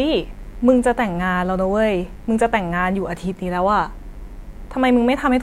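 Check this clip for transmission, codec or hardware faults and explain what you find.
One hardware fault runs through the whole clip: mains buzz. A steady, raspy buzz sits under the speech from start to finish, well below it. Sharp switching spikes from the 50 Hz supply leak in twice per cycle, spreading harmonics of 50 Hz up into the kilohertz range.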